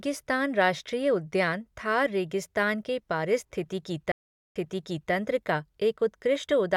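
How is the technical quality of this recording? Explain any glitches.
A single stream reconnect disrupts the speech. After "थार रेगिस्तान के पारिस्थितिकी", at 4.12 s the connection dropped, leaving 0.43 s of silence. A fresh decoder then resumed about 0.58 s earlier, so audio repeats, unlike a simple dropout, through 5.12 s.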